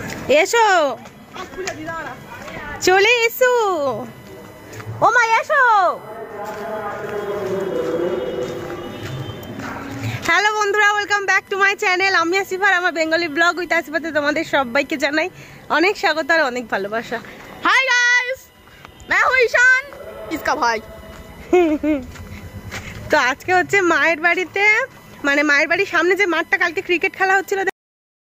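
A USB whine runs through the whole clip. It is a steady tone at 1 kHz, with its strongest component at the 2 kHz harmonic. It sits roughly 35 dB below the signal, so it is faint. The cause is the USB bus pulling current in regular 1 ms frames. That ripple gets into the audio through shared power or ground. The result is a fixed-pitch whine that never drifts.

At 27.69 s the audio hits a cut-off end. The sound stops abruptly, mid-event, and drops straight to digital silence. There is no decay or fade. The silence lasts until the clip finishes. What went wrong is that the final buffers were never written out or played back. The recording simply ends partway through whatever was sounding. It is heard as a hard, unnatural stop.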